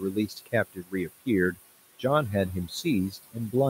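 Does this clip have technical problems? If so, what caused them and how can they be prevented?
Yes. There are noise suppressor artifacts throughout: the suppressor pulls the room noise (only about 13 dB under the speech) down by about 17 dB whenever it judges a band to be noise, so the background pumps between phrases. Preventing it means easing the suppression depth or lowering the room noise at the source.

There's also speech cut by the noise suppressor at 0.0–0.54 s, 0.73–1.1 s and 3.11–3.35 s. The suppressor mistook quiet speech for noise and ducked it by about 17 to 21 dB, so a couple hundred milliseconds in each early stretch sound swallowed. A gentler suppressor setting or a better signal-to-noise ratio at the mic would prevent this.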